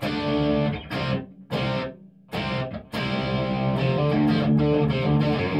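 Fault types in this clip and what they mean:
No fault types turn up in the clip, so there is nothing to explain.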